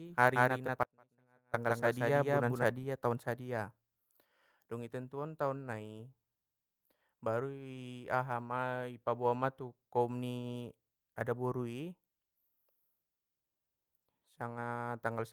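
From the very start until 2.64 s, just before "taon sadia", a doubled audio track runs, with a second copy at about the same level trailing by roughly a fifth of a second. Unlike an echo or room reflection, it has no decay or colouring. It stops abruptly, likely because the sound was also captured through a slower path.

Within that stretch, from 0.83 to 1.54 s, comes an audio dropout to a faint residue. For about 0.7 s the sound collapses to a faint trace roughly 30 dB down, likely because the signal was lost while the path stayed live. The cut in and out is sudden, which a natural pause or fade wouldn't be.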